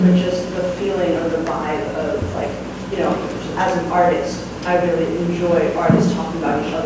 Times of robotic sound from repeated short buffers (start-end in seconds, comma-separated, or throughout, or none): none